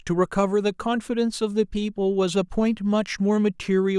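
No technical faults can be heard anywhere in the recording.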